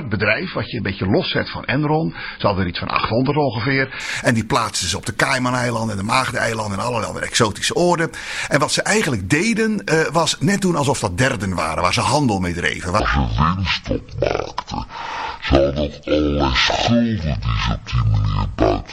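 From 0.0 to 4.0 s the audio has its treble missing or synthetic, with a dull, swirly codec texture. This is an adaptive stream starting at a low bitrate: the player began on a cheap MP3 version, consistent with roughly 18 kbit/s, then switched at 4.0 s to a fuller one around 128 kbit/s. The step up is abrupt and gapless. A spectrogram shows the treble region that suddenly fills out at 4.0 s.

From 13.00 s to the end, a section at the wrong speed plays at 0.547 times its proper rate, so everything turns slow, heavy and about ten semitones lower, with speed and pitch dropping together in one jump. The likely cause is playback or editing against the wrong clock. On a spectrogram every harmonic and formant shifts down to just over half its frequency, and in the waveform each event is stretched to nearly twice its length.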